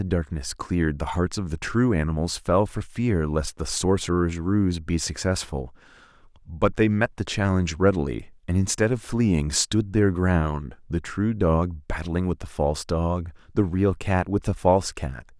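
No dropouts, clipping, glitches or other technical faults can be heard anywhere in this speech recording.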